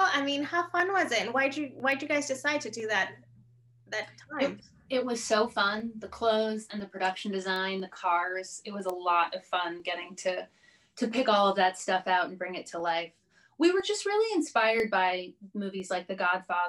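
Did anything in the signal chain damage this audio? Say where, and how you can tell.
Yes. Bit error spikes at 1.92, 7.56 and 8.90 s are single-sample ticks, about -21 to -15 dBFS, unrelated to the sound. These are flipped bits in storage or on a digital link.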